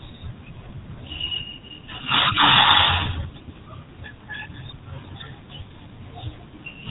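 From start to finish the speech carries the signature of the GSM full-rate codec, with plainly audible damage. The codec rebuilds the vocal tract from a filter model excited by a sparse, regularly spaced pulse train, which gives the voice a buzzy, gravelly grain consistent with a 13 kbps stream. On a spectrogram, energy stops abruptly at 3.8 kHz, leaving an empty band above, and harmonics look smeared and coarsely quantised.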